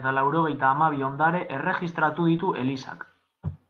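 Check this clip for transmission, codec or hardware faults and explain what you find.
Two network faults overlap in one short stretch of the speech, about two-thirds of the way through.

Short concealed packet loss, 2.37 to 2.41 s: about 20 ms of audio arrived too late to decode. The receiver bridged roughly 12 ms by extending the preceding sound, then blended back, leaving a brief smear or wobble.

Lost packet rebuilt from error correction, 2.39 to 2.41 s: one packet went missing, but the following packet carried a low-bitrate copy of it. The decoder played that 20 ms copy instead of leaving a hole, so the sound continues but turns briefly grainier and noisier. On a spectrogram the harmonics look blurred and speckled with noise. The waveform has no gap.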